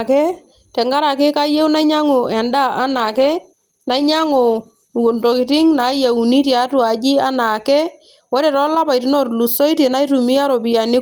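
A call bitrate drop runs from 2.92 s to 6.41 s, starting right after "tenkaraki kayieu nainyiangu endaa". The sound turns rough and watery, and the top end dulls, consistent with the encoder being pushed from around 48 kbps down to roughly 18 kbps after the call's bandwidth estimate fell. At that lower rate the speech is coded more coarsely and the high frequencies are cut off. The worst stretch lasts about 2.4 s before quality climbs back.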